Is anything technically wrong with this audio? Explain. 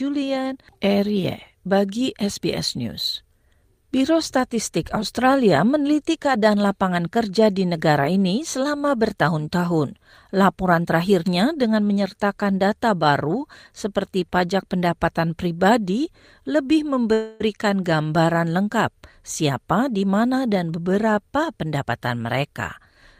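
Yes, there are two faults in this speech clip.

From 17.13 to 17.42 s, right after "pajak pendapatan pribadi lebih" and before "gambaran lengkap", there is a call audio freeze. The final sound before the stall is held as a continuation for about 268 ms, then speech resumes where it stopped. Nothing is lost, but the stream now runs 268 ms late. The likely cause is delayed packets draining the jitter buffer, so the receiver filled the gap by extending what it last had.

From 19.22 to 22.38 s, after "gambaran lengkap", there is a jitter buffer speed-up. The speech plays about 108% of normal rate with its pitch unchanged, so it sounds hurried. This happens when the buffer holds more audio than its target, and the receiver catches up by repeatedly cutting pitch-period-length fragments. Here that trims roughly 0.3 s in total.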